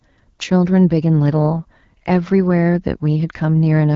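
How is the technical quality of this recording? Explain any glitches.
Listening through this speech recording, nothing stood out as a glitch, with the wideband phone-call character of AMR-WB at 12.65 kbit/s coming across as clear, intelligible speech.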